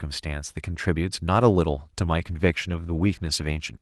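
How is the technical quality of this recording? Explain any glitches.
The recording has one clear glitch near the end: a call bitrate drop starting at 2.18 s and lasting to the end of the clip. The call's bandwidth estimate fell, so the Opus encoder was told to spend far fewer bits, consistent with a fall from 32 kbps to around 17 kbps. Coarser coding then roughens the speech and gives it a watery, muffled quality for the remaining 1.6 s, with no recovery before the clip ends. Before 2.18 s the call path's usual codec character is audible, with high frequencies limited to about 12 kHz.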